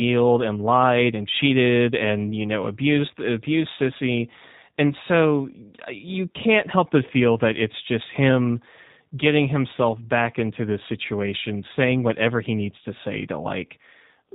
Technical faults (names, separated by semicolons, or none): G.729 codec